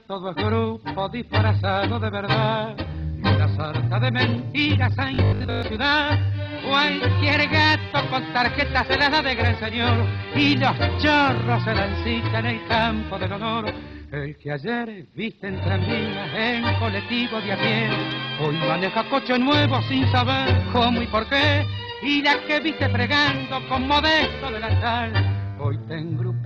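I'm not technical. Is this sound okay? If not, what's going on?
No, there's one rough patch. From about 5.15 to 5.63 s, the sound turns into a flat, metallic 50 Hz buzz. That's robotic sound from repeated short buffers. New audio was likely arriving too slowly, so the software kept replaying the last tiny slice, about 20 ms long, for most of that half-second. Replaying the same slice over and over adds a buzz at a fixed rate, which is why it sounds mechanical.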